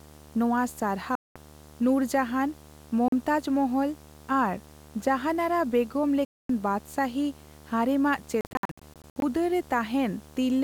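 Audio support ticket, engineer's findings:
Constant low buzz at 75 Hz with fizzy hash riding above it, present from start to end, roughly 25 dB below the speech. Video or display buzz: a screen or video cable coupling its 75 Hz field rate into the audio path.

Speech cuts to silence at 1.15–1.36 s, 3.08–3.13 s and 6.25–6.50 s, resuming further on as if it had kept playing. Choppy stretch 8.41–9.22 s: short holes, longest 61 ms, about 0.41 s lost. Bluetooth dropout likely: late packets discarded before reaching the headphones.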